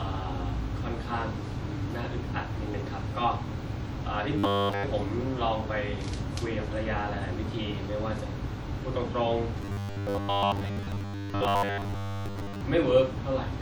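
From 4.39 to 4.85 s, and again from 9.62 to 12.61 s, the speech goes robotic: a rigid metallic buzz at 100 Hz, likely from a 10 ms buffer being repeated while real audio is skipped. The first stretch is entirely buzz; the longer second one is mostly buzz.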